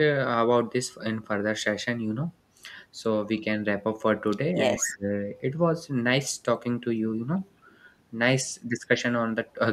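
A speech recording, with both faults bunched in under a third of a second. From 4.78 to 5.07 s the speech is suppressed in double talk: the level dips sharply, by about 25 dB at its deepest, most likely because an echo canceller pushed down the near talker while the far side was also speaking. On a waveform this shows as a sudden notch in the envelope. Overlapping it, from 4.79 to 4.96 s, there is an echo leak: a faint copy of the voice arrives 199 ms late, about 10 dB below the speech, likely from loudspeaker pickup that the far end's canceller failed to remove. A spectrogram shows it as a fainter, shifted repeat of the harmonic pattern.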